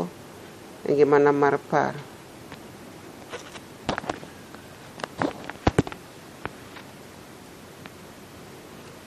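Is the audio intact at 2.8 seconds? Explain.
No, at 2.8 seconds the speech sounds watery and swirly, with nothing above 13.8 kHz, likely from MP3 compression at a low bitrate near 48 kbps.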